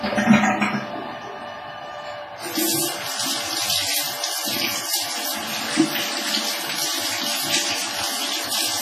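From start to finish the audio carries heavy transform-codec damage, most likely from WMA compression at a low bitrate in the region of 24 kbps. Quantisation noise smears across long blocks, so transients ring and sustained parts sound washy, with a hiss that swells and fades with the signal. On a spectrogram, content stops sharply at 15 kHz, weak components drop out as holes and blotches, and noise fans out around each onset.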